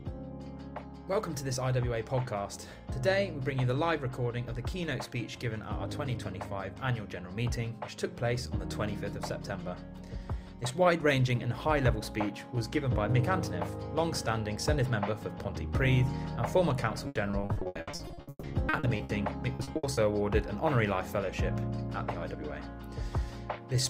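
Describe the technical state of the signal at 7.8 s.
Nothing at 7.8 s points to a technical fault; the signal is intact at that moment.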